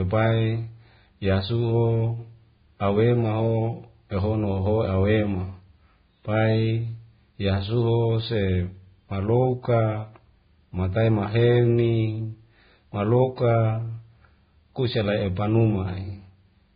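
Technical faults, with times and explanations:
Throughout, Vorbis compression: the speech sounds hissy and grainy, with roughened tones, smeared consonant attacks and nothing above 4.9 kHz. This heavy damage likely comes from Vorbis encoding at a low rate, which fits roughly 15 kbps, where coarsely quantised treble turns into noise.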